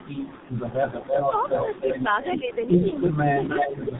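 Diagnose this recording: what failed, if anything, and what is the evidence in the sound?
Tandem speech coding at the codec stage, throughout. Nothing sounds above 3.8 kHz. Two speech coders in a row, AMR-NB then G.723.1, compound roughness and muffling.

Echo leak in call processing. A copy delayed 311 ms appears from 0.27 to 2.03 s, 2.22 to 3.16 s and 3.44 to 3.75 s. It sits about 5 dB down, then near speech level. Likely cause: incomplete echo cancellation.

Speech suppressed in double talk. The talker dips by roughly 10 dB from 3.16 to 3.29 s and 3.79 to 3.91 s. The likely cause is the canceller turning both sides down.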